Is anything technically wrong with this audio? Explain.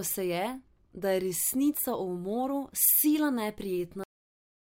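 Yes, the recording ends with a cut-off end at 4.04 s. The final stretch of speech was never written or played out, so the signal stops partway through a sound instead of finishing. There is no natural tail or fade of room decay. The level falls straight to digital silence, which lasts for the remaining 0.7 s. The speech seems chopped off mid-utterance, followed by dead, empty quiet.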